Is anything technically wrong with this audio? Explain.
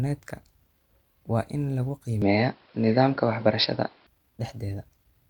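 Yes. Right after "waa in lagu", from 2.22 s to 4.07 s, the speech turns dull and boxy, with nothing above 5.4 kHz, a level shift of roughly 5 dB and a faint new noise about 40 dB below the speech. It clears abruptly afterward, with no gap at either switch. The likely cause is an input switched to a poorer device: capture moved briefly to a narrower-band microphone or headset profile with its own tone, gain and noise floor.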